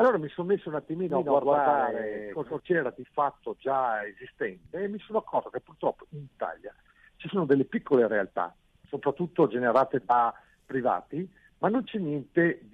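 From 1.10 to 2.60 s, a doubled audio track appears. A second copy trails by roughly 150 ms, equally loud and dry. It likely comes from a second capture path.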